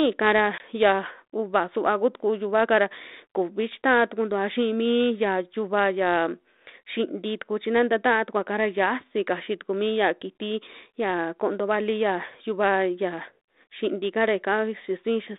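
Speech carried over a G.726 ADPCM line at 32 kbit/s, band-limited to about 250 Hz to 3.7 kHz, suffers packet loss on an ADPCM call from 0.58 to 0.62 s: about 20 ms, apparently a single packet, is lost and replaced by silence, knocking the decoder's prediction out of step. The result is a hard-edged gap, then slight distortion as the speech returns on "ya uuva suva kutuku".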